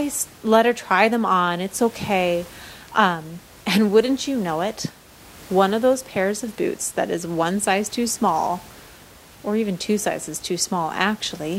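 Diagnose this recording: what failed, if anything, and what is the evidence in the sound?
Nothing in this speech recording points to a failure at any stage of the chain. The only thing beneath the speech is the room's own background noise, sitting about 24 dB lower, which belongs to the space where the microphone was placed rather than to the system.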